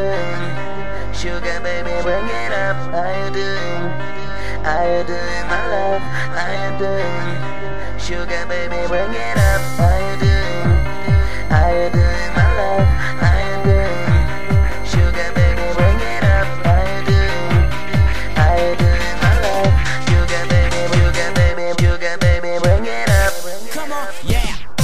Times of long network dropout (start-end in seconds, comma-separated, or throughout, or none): none